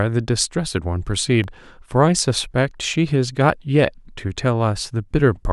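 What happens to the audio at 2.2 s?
At 2.2 s the speech falls within periodic USB or driver dropouts from 1.44 to 2.94 s: roughly 1 ms gaps of silence every 0.5 s, heard as regular ticks.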